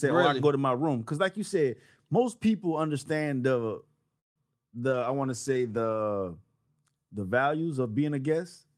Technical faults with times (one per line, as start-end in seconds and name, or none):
4.19-4.38 call audio freeze
4.42-4.44 short concealed packet loss
4.89-6.08 call bitrate drop